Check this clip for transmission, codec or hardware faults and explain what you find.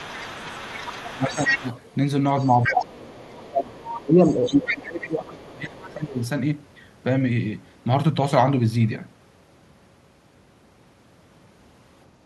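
Two related echo-path faults appear in this speech clip, both in the first 6.2 seconds.

Other side's voice leaking through, from 0.0 to 1.95 s, 2.39 to 3.86 s, 4.29 to 5.08 s and briefly at 5.83 to 5.94 s. The far-end talker is audible underneath the near talker, about 10 to 15 dB below the speech in the longer stretches and about 30 dB down in the last short scrap. The likely cause is a loudspeaker feeding back into the microphone, with the echo canceller leaving residual echo it failed to model and subtract.

Speech suppressed in double talk, at 0.18 to 0.59 s, 1.11 to 1.66 s and, longest, 2.44 to 6.18 s. The near talker's level sinks while the far-end voice is present, by about 15 dB, then about 10 dB, and by about 20 dB in the long stretch, where it is affected for roughly three seconds. This likely comes from the echo suppressor treating simultaneous speech as echo and attenuating the whole signal, the wanted talker included.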